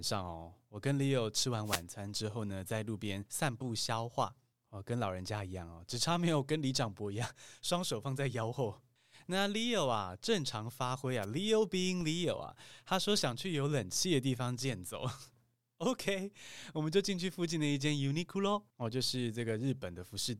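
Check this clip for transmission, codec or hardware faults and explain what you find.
Two hardware-side faults show up in this speech clip. There are wireless microphone noise hits from 1.64 to 1.83 s, between "吃完" and "餐之后呢", and from 11.22 to 11.26 s, after "正常发挥". The FM signal fades out and receiver static swishes in over the voice. There is also a DC step at 12.01 s: the zero line jumps about -36 dBFS, giving a low thump, then drains away through a 20 Hz high-pass.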